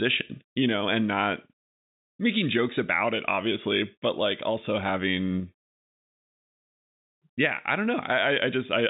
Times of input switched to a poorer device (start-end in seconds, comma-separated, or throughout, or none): none